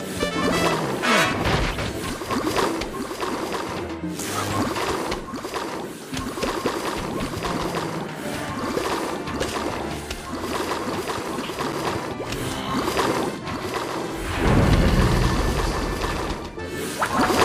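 From 13.61 s to the end, a flat, undecayed second copy trails about 150 ms behind at roughly 5 dB lower: a doubled audio track, likely from a duplicate capture path.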